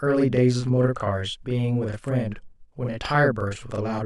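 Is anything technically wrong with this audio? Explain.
Yes. Throughout the speech there is channel delay (doubling): one channel runs 40 ms behind the other, and the two are summed to mono. At that gap the late copy separates into a distinct slap at equal level, unlike the hollow comb-filter tone of a delay of only a few milliseconds, or the decaying tail of room reverb.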